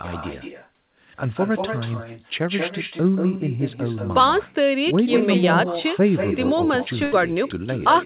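Echo with no canceller runs throughout. Speech returns from the far loudspeaker about a fifth of a second later, only about 6 dB quieter and thinner. At 7.04 s, a burst of packet loss hits. The last sound is stretched and fades for 77 ms, then 80 ms of speech is skipped.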